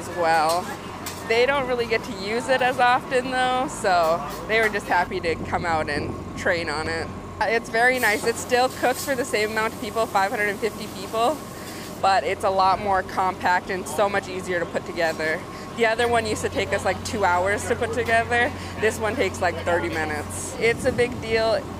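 There are no technical faults to describe, so there is nothing to place in time order.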